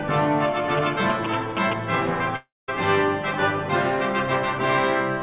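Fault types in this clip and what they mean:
GSM signalling bursts: A nearby 2G phone sending short radio signalling bursts gets rectified by the audio circuitry, so from 0.77 to 1.73 s a galloping pattern of short buzzes at about 217 Hz sits on the sound, roughly as loud as it.
Long network dropout: A stretch of audio likely never arrived over the network, so from 2.36 to 2.70 s about 320 ms is gone. The last sound carries on as a fading buzz or hiss, then about 210 ms of silence follows before the audio resumes.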